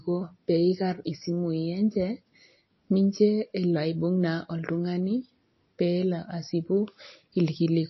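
Throughout the speech, plainly audible codec damage gives a watery, swirling texture, and nothing is heard above 5.8 kHz. This is likely MP3 compression at a low bitrate, fitting about 26 kbps, where starved frequency lines flicker between frames and the treble is cut off.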